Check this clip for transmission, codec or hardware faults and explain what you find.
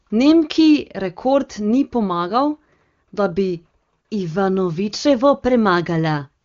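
Nothing in this speech clip points to a transmission, codec or hardware problem; it sounds like ordinary wideband HD Voice, which fits AMR-WB at its top rate of 23.85 kbit/s, with the expected lack of content above about 7.3 kHz.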